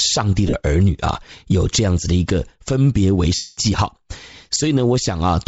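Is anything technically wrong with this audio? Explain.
Yes. Throughout, the speech has a breathy, grainy upper band from Bluetooth LC3 compression. This is likely the cause, since the noise-filled top end sounds like a low bitrate near 32 kbps, unlike the swirly artefacts of MP3.

Lost LE Audio frames occur at 0.48–0.56 s, scattered with a longest gap of about 40 ms, and at 3.35–3.58 s for 225 ms. The decoder repeats the last spectrum with scrambled phase, so the speech smears into noise and then fades, instead of clicking or going abruptly silent as with dropouts.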